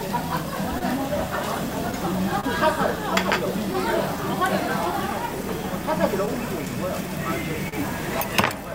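Clock drift between sender and receiver runs through the whole recording of everyday sounds. The sender's clock seems about 2 percent slow, so the receiver's buffer keeps draining and needs constant small fixes.

From 0.08 to 7.03 s, repeated timing corrections play the material back at 99 percent speed, stretching it by around 50 ms. On a waveform this appears as tiny duplicated slivers at uneven spacing, heard as faint hiccups.

At 0.78 to 0.83 s, a short stall from a late packet holds the last sound for 25 ms until the data arrives. A spectrogram shows a brief frozen, smeared column there, heard as a slight buzzy hold.

At 2.40 to 2.45 s, a second stall holds the sound for 29 ms, with the same frozen spectral slice and a small waveform dip.

Between 6.25 and 7.74 s come scattered short gaps. There are about three small holes, the longest around 40 ms, each patched by continuing the previous sound. 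They show as brief flattened patches and are heard as quick ticks or smears.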